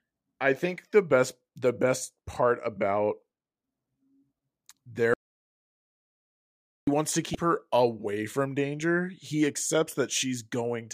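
At 5.14 s the speech cuts off into an audio dropout to silence lasting until 6.87 s, about 1.74 s, resuming on "wants to". The gap holds plain silence with no room tone, unlike a natural pause, pointing likely to a lost input signal.

From 7.32 to 7.35 s, between "wants to" and "her away from danger", damaged data in a compressed stream produces a brief disruption of about 34 ms. The decoder misreads corrupted frames and resyncs.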